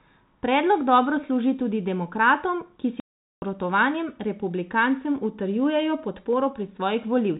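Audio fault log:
3.00–3.42 s, packet loss filled with silence. Right after "služi tudi demokratom ki" the speech drops out completely for 0.42 s. The receiver had nothing to play for that stretch, so it inserted dead silence. The gap's length fits 14 lost packets of 30 ms each. Both edges are hard cuts from signal to silence and back. Around the hole, the speech keeps the narrow telephone band of G.711 coding.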